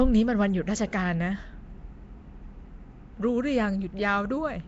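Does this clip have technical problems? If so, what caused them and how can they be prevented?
Yes. Throughout the speech there is a rough, hissy halo and a smeared, underwater quality, with nothing above 7.7 kHz. This is likely Nellymoser compression: its fixed two bits per sample leave weak bands empty and fill them with noise, at a rate that fits about 32 kbps. MP3 artefacts tend to warble and swirl, but this hiss forms a rough halo around the speech. Capture or send the audio with a modern codec such as Opus instead of Flash's Nellymoser Asao.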